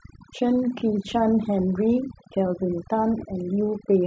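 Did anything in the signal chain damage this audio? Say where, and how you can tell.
Yes. Overdone noise removal in the processing stage, probably call processing, damages the whole clip. Between phrases the background drops to near silence dotted with twinkling specks, and quieter components of the speech were cut along with the noise. A low-bitrate codec spreads its damage according to its bit budget, but here the damage tracks the noise floor: a suppressor set too hard shuts off individual frequency bands wherever they sit near its noise estimate.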